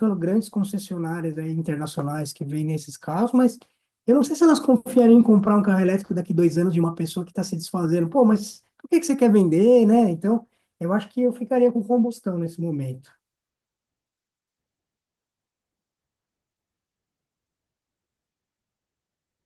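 Nothing in the speech stood out as a technical fault on listening.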